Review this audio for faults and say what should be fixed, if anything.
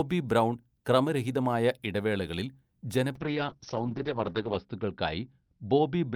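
A call bitrate drop begins at 3.18 s and lasts to the end at 6.16 s: the bandwidth estimate fell, so the Opus encoder was starved of bits, which fits a fall from about 48 kbps to about 7 kbps. The speech turns coarse and watery, and its audio bandwidth narrows from 20 kHz to 6 kHz, sounding most degraded for roughly 1.4 s. Prevent it by smoothing the bandwidth estimator and setting a higher minimum encoder bitrate.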